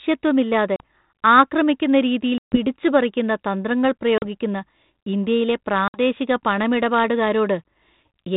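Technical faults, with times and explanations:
0.76 s, 2.38 s, 4.18 s and 5.88 s, packet loss on an ADPCM call: the speech drops into hard-edged silence for about 40, 140, 40 and 60 ms. The longest gap fits about seven lost packets, and the others fit two or three. The receiver's adaptive predictor and step size drift away from the sender's during each hole. So the speech comes back slightly distorted, and it settles within tens of milliseconds. The band tops out at 4 kHz, which fits light 32 kbit/s G.726 coding.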